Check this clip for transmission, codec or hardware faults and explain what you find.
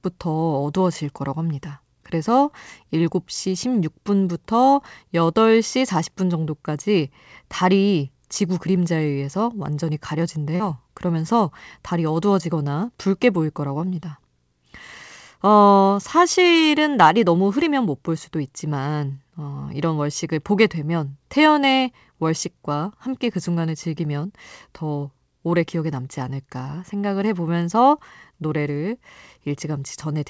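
One transmission fault is audible: short concealed packet loss at 10.56 to 10.62 s, heard over a call path whose band stops at 8 kHz, consistent with a wideband codec such as G.722.

Around 40 ms of audio never arrived in time, so the receiver extended the preceding sound for about 36 ms before blending back. It sounds like a brief smear or wobble. A spectrogram shows repeated, slightly blurred frames there, and the waveform shows a too-regular stretch.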